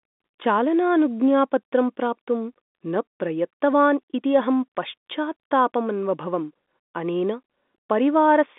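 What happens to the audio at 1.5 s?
Nothing goes wrong at 1.5 s: the speech carries on intact there, heard through the narrow band of G.711 telephone coding with nothing above about 3.8 kHz.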